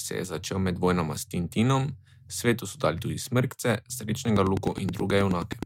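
From 4.36 s to 5.64 s, a train of clicks sits over the speech. About fifteen sharp pulses arrive evenly, roughly 9.5 per second. They peak around 10 dB above the speech. The likely cause is interference from nearby equipment or a faulty connection or power supply.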